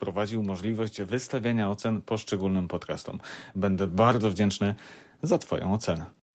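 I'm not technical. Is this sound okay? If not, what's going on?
No. From about 0.95 to 2.78 seconds there's automatic gain rising: the call's level control decided things were too quiet and slowly turned everything up, background included.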